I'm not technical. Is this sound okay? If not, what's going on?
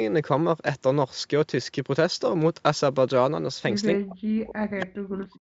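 No, not quite. From about 3.98 s right to the end, the speech drops away sharply, at its worst almost to nothing. That looks like speech suppressed in double talk: both sides likely talked at once, and the call's echo remover turned this voice down too.

Then, from 4.80 to 4.86 s, a brief faint scrap comes back about a quarter of a second late. That's an echo leak: the other end likely had a loudspeaker, and their microphone caught it and sent a bit back.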